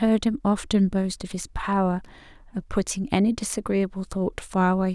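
At 2.05 s a burst of loose connector crackle breaks into the speech and runs to 2.12 s, about 70 ms. A worn or dirty contact in the signal path is making and breaking contact as it shifts. Each break chops the signal off, and each reconnection snaps it back. Any DC on the line turns those transitions into pops. The result is a brief, irregular scratching crackle over the speech.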